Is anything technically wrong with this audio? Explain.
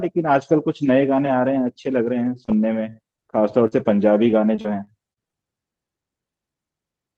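Yes, there are several packet-loss faults in this speech.

At 2.07, 2.25 and 2.48 s, brief rough, noisier patches appear with no gap. This is a lost packet rebuilt from error correction: each missing 20 ms was replayed from a low-bitrate backup copy carried in the next packet.

From 2.45 to 2.50 s there is a quick smear. This is short concealed packet loss: about 20 ms never arrived, so the decoder extended the preceding sound and blended back into the real audio.

Between 3.16 and 5.35 s the speech turns choppy. This is repeated packet loss (robotic sound): seven separate gaps, the longest 44 ms, were each patched by continuing the last sound. About a tenth of that stretch is filled-in audio, and roughly a tenth of a second more was rebuilt from backup copies.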